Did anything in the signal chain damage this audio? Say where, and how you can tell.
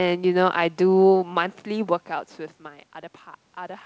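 No, nothing in the chain damaged it: the steady background is the room's own noise, the level shift around 1.5 s is the talker moving relative to the microphone, and the band ending at 8 kHz with the usual coding texture is normal for a wideband call path, consistent with G.722 at 64 kbps.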